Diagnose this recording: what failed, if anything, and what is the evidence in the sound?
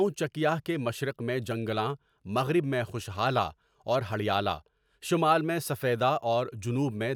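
Nothing in this speech recording points to a failure at any stage of the chain. There is no evidence in the sound that calls for a diagnosis.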